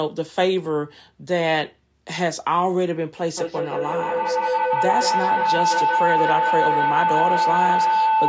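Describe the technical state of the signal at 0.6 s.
At 0.6 s the speech signal is intact, with nothing wrong to be heard at that moment beyond the ordinary band-limiting of call microphone processing, which leaves nothing above 8 kHz and trims the lowest bass as expected.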